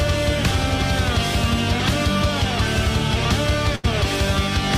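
At 3.75 s the last sound is stretched out and fades for about 80 ms, then jumps ahead at 3.85 s with material missing. This is a burst of packet loss: the receiver extended the last audio while attenuating it, then resumed later.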